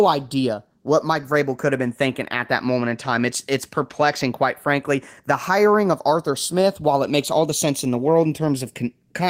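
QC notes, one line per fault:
throughout, channels drifting apart: inter-channel delay creeps to about half a millisecond, fitting roughly 70 ppm clock mismatch; mono sum gives slow flanging, unlike a fixed comb's static colouration.
throughout, gain pumping: gain ducks about 5 dB under loud speech, likely excessive gain hitting a fast limiter; loud and soft parts end up closer in level.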